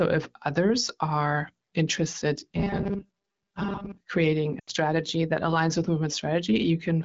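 From 2.51 to 4.01 s, just after "others are interested", the speech turns into a rigid metallic buzz that still loosely tracks the syllables. This is robotic sound from repeated short buffers, likely caused by audio arriving too seldom, so that about 5 ms slices are replayed for most of the stretch. That repetition imposes a fixed 200 Hz buzz. A spectrogram would show evenly spaced 200 Hz harmonic lines, and a waveform a visibly periodic pattern.

From 4.59 to 4.70 s, just before "that aligns with", lost AMR speech frames leave roughly 80 ms missing, consistent with four consecutive frames. The decoder holds the last good pitch and vocal tract settings while fading the gain, so the sound drops to near silence within two frames. A spectrogram would show frozen formant bands dimming, and the waveform envelope would shrink sharply.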